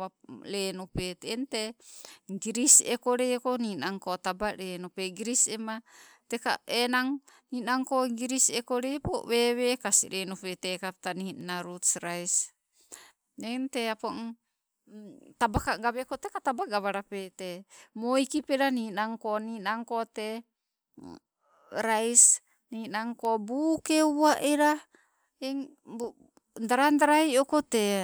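Nothing technical goes wrong anywhere in this speech recording, so there's no fault to walk through here.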